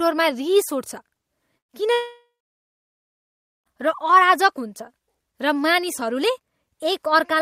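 A speech clip with two network faults. At 1.57 to 1.72 s a burst of packet loss drops about 120 ms: the last sound is stretched into a fading buzz or hiss, seen as a decaying waveform envelope, before speech resumes with that stretch missing. From 1.93 to 3.69 s there is a long silence, most likely a long network dropout. A brief fading continuation quickly gives way to about 1.4 s of flat-line waveform and a blank spectrogram band, and about 1.7 s of speech is lost.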